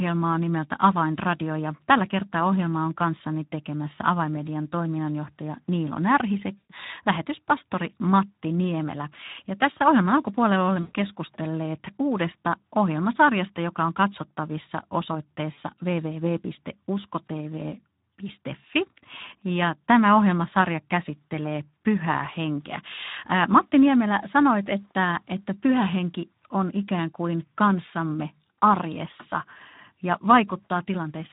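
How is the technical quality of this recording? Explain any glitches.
The recording has plainly audible codec damage throughout and three short dropouts.

The Speex codec, at a low setting that fits a bitrate around 11 kbps, starves the excitation, leaving the speech noisy and hoarse throughout.

VoIP packet loss concealed by the speech codec occurs at 6.58 to 6.71 s, 10.81 to 10.96 s, and 15.53 to 15.59 s. The decoder stretched the last pitch and filter across the gaps, about 120 ms at the first two and about 40 ms at the third. This smears the sound into a fading buzz or coloured noise and leaves the speech weak briefly after each gap.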